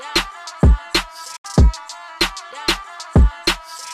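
At 1.36 s a digital broadcast dropout mutes the audio: the receiver stopped getting valid frames and fades to silence over about 8 ms, returning at 1.45 s. Unlike packet-loss concealment, the gap is true silence, and the sound resumes later in the programme, consistent with roughly three lost frames.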